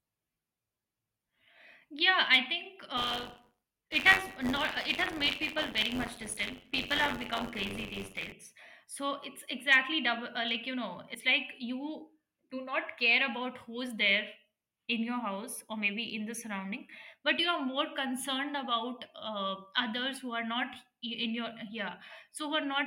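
From 2.97 to 8.33 s the speech carries a rattling, robotic buzz at 93.8 Hz. This is buffer tearing, where the writer and reader of the playback ring buffer have slipped so that they cross within each period. The rate fits a 512-sample buffer. In each cycle roughly a tenth of the buffer replays audio from about 40 ms earlier. A waveform would show hard steps at every boundary. A spectrogram would show evenly spaced vertical lines about 10.7 ms apart, with the buzz present only while sound is playing.

At 11.14 s a brief smeared blip marks compressed frames skipped. Roughly two 21.3 ms frames never reached playback, so the speech jumps ahead about 40 ms. Overlapping frames soften the join, so the waveform shows an abrupt envelope change with no sharp step, and the spectrogram shows a short smudge where the formants shift.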